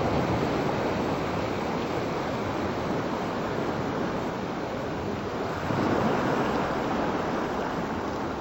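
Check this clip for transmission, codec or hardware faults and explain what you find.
One fault runs through the whole clip.

Stereo read as mono, throughout: interleaved left and right samples are taken as consecutive samples of a single channel, doubling the sample count. Everything plays at 0.5x speed and a full octave (12 semitones) low, sluggish and deep.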